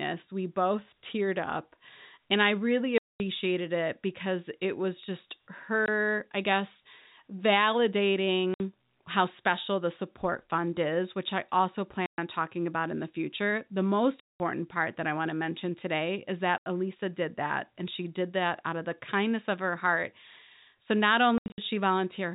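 Packet loss filled with silence cuts hard-edged holes into the speech at 2.98 s (after "I really", about 220 ms), 5.86 s, 8.54 s (before "how special the support"), 12.06 s (after "is which I also"), 14.2 s, 16.58 s, and in scattered gaps from 21.38 to 21.58 s. Each gap is a multiple of 20 ms, which points to 20 ms packets replaced by silence. The waveform drops abruptly to a flat line and the spectrogram shows blank vertical bands. The G.711 telephone band still caps the spectrum at 4 kHz.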